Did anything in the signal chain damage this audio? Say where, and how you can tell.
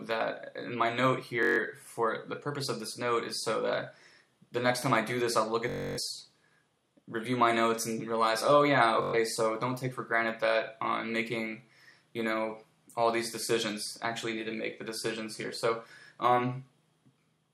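Yes, Bluetooth stutter at the wireless link: 1.43–1.60 s, 5.70–5.99 s and 9.02–9.15 s buzz as late packets force the last buffer to replay, then audio jumps ahead.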